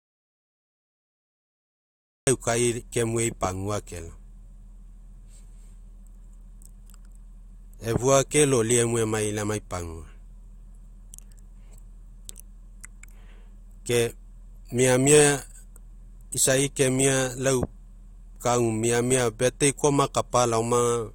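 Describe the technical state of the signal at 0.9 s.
At 0.9 s the signal is in an audio dropout to silence that is already under way when the clip begins and runs until 2.27 s. The input feeding the recorder was most likely lost, through a disconnected device, a broken link or an accidental mute, while writing continued with silence. The result is dead silence with no room tone at all, and any speech from that stretch is simply absent before sound resumes.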